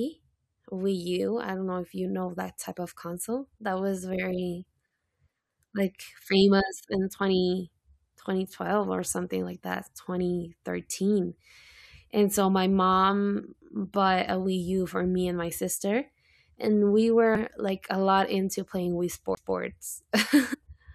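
At 17.35 s, just before "like a lot into", a short glitch marks damaged data in a compressed stream. Corrupted bytes made the decoder misread frames and hunt for the next header. The same fault recurs from 20.53 to 20.55 s.

From 19.35 to 19.37 s comes a CD skip. A brief mute of around 20 ms is followed by the speech resuming elsewhere, as the laser jumped to another turn of the spiral. What sets it apart is a clean displacement by disc turns rather than a garbled, chirping sound.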